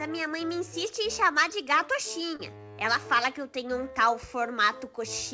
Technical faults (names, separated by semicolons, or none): short concealed packet loss